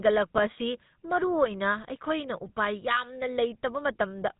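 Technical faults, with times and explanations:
Throughout, GSM full-rate codec: plainly buzzy, gravelly speech from coarse pulse-driven vocal-tract modelling, fitting a 13 kbps coder; the spectrogram is empty above 3.8 kHz, with smeared harmonics.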